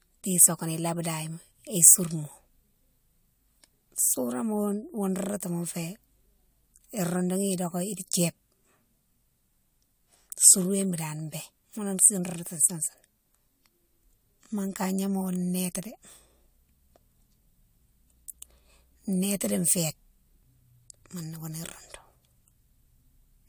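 Generation loss runs throughout the speech: a swirly, hollow smear with softened consonant attacks and nothing above 20 kHz. It likely comes from roughly three rounds of lossy encoding, which fits AAC-LC near 96 kbit/s, each pass requantising on a shifted frame grid.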